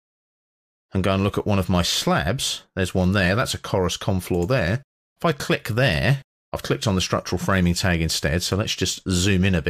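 No technical faults can be heard anywhere in this recording. The audio runs without any break or disturbance to its signal.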